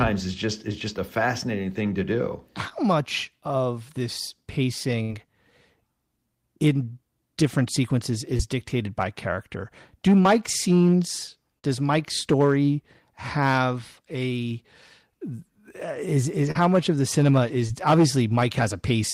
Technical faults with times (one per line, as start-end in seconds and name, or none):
2.69-2.73 short concealed packet loss
5.03-5.11 burst of packet loss
8.37-8.41 short concealed packet loss
11.59-11.65 short concealed packet loss
16.51-16.57 short concealed packet loss
17.67-17.70 short concealed packet loss